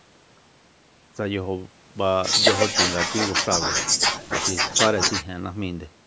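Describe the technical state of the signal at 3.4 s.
At 3.4 s the speech is intact, with no dropout, click or distortion, only the normal band limit of call microphone processing, which leaves nothing above 8 kHz.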